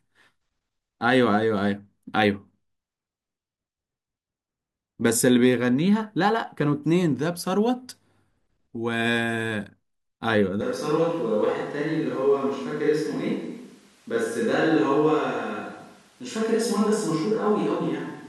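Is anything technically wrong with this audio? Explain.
Yes. From 10.61 s to the end, the sound abruptly becomes roomy and hollow, with thinner bass, a level drop of about 5 dB and room noise around 35 dB below the speech. This is likely a switch to a distant microphone after the close one dropped out. The waveform steps down in height, and the spectrogram loses low-frequency energy and gains a smeared reverberant tail and a raised noise floor.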